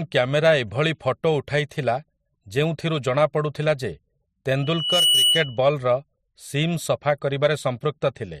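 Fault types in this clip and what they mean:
Loudspeaker feedback squeal: from 4.62 to 5.59 s, a single 3 kHz tone rises out of the speech, swelling over roughly 0.4 s and settling at about 5 dB above the speech level before it stops. A microphone is picking up the loudspeaker it drives, and at 3 kHz the gain around that loop exceeds one. Each pass reinforces that frequency, so it keeps growing until something limits it or the loop is broken.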